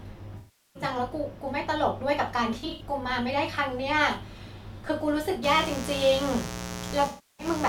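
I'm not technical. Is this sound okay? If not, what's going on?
No. There are two separate problems in this speech recording.

The first is AAC frame loss with concealment. AAC is a compressed audio format that sends sound in small chunks. When chunks go missing, the player patches the gap by reusing the last good sound, so those moments come out smeared and noisy instead of clear. This happens at 0.37 to 0.83 s, where about 0.38 s is missing; at 2.59 to 2.82 s, where several short dropouts add up to about 0.15 s; and at 7.07 to 7.46 s, where about 0.32 s is patched over.

The second is mains buzz, which starts at 5.43 s and lasts to the end. Electrical interference from the power supply gets into the audio as a hard, raspy hum. It follows the 60 Hz of the mains, with a sharp click twice in every cycle, and includes harmonics that reach well up into the treble. It is loud enough to sit clearly under the speech, and it overlaps the last dropout.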